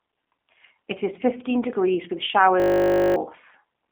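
From the start, the speech sounds narrow, slightly rough and synthetic, with a boxy phone-line tone. The band runs only from about 250 Hz to 3.4 kHz, and nothing at all comes through above 3.5 kHz. This is G.729 codec damage, and it is plainly audible. The audio has been rebuilt from a vocal tract filter, a pitch predictor and a few pulses per frame instead of the original waveform, which fits an 8 kbit/s G.729A stream.

From 2.6 to 3.16 s the speech gives way to a steady buzz pitched at 50 Hz. That buzz is a system hang loop. The machine or its driver froze while the sound hardware kept replaying the same 20 ms slice of its ring buffer, 28 times over, which points to a 20 ms buffer. The short slice repeating 50 times a second produces the buzz rather than a stutter. Roughly half a second of the real audio is lost.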